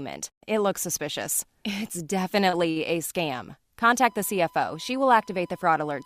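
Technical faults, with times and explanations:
2.49 s and 2.71 s, short stall from a late packet: sound held 33 ms then 50 ms while the jitter buffer sat empty, so nothing is lost, unlike a dropout.
4.03 s to 6.05 s, USB whine: steady 1 kHz tone about 30 dB below the signal, fixed in pitch, from USB frame current leaking through power or ground, unlike mains hum.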